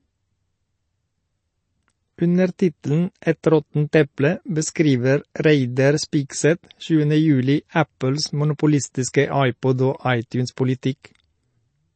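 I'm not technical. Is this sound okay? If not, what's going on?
No. Throughout the speech, the sound is dull and clearly watery, with a swirly, metallic edge on hissy sounds like s, and nothing at all above 8.3 kHz, so the crisp top end is missing. This is likely MP3 compression squeezed too hard. To save space, the encoder cuts off the highest frequencies and throws away quieter details, and those details flicker in and out from moment to moment, which causes that bubbly, smeared quality.

At 10.56 s, a sudden sound is preceded by a brief hiss, and the start of it sounds softened rather than sharp. This is pre-echo. The compression works on short chunks of sound at a time, and its noise gets spread across the whole chunk. When a sharp onset comes late in a chunk, the noise meant for the loud part also leaks into the quiet moment just before it.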